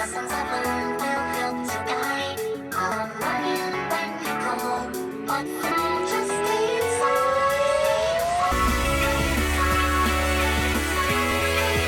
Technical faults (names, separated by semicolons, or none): audio missing between chunks